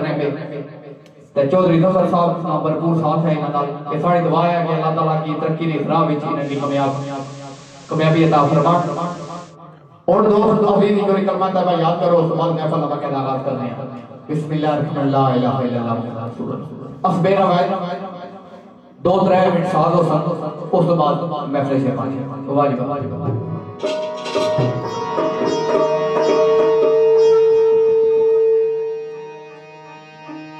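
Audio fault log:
6.38–9.56 s, digital radio blending to analogue: the receiver lost the digital stream and cross-faded over about 150 ms to the station's FM broadcast, then returned. While on FM, the sound takes on hiss sitting roughly 30 dB under the programme and shifts in level by about 2 dB. A spectrogram shows a grey noise floor filling in during the FM stretch. The waveform shows a small step in envelope height at each transition.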